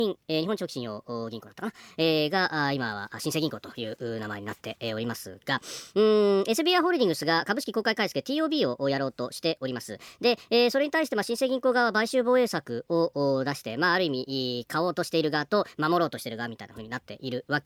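Throughout the clip, samples are played at a faster rate than they were captured, with no conversion: a wrong sample rate. The 1.38 times speed-up fits 32 kHz audio played at 44.1 kHz. It lifts pitch by 5.55 semitones, so the speech sounds high and hurried.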